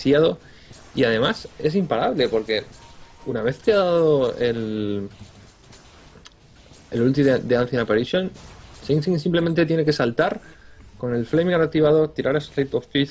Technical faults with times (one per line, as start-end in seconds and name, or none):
none